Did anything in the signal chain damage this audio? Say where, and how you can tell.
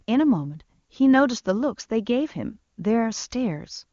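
No, nothing damaged it.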